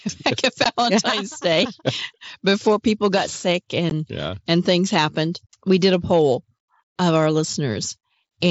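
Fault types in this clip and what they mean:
Unconcealed Bluetooth headset packet loss: lost voice packets replaced by silence or an idle pattern, leaving two abrupt 15 ms holes.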